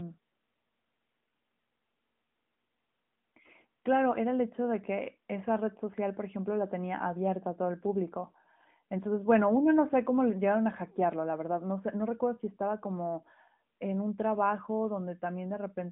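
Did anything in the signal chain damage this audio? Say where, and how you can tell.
No, nothing in this speech stood out on listening as damage from any stage of the chain.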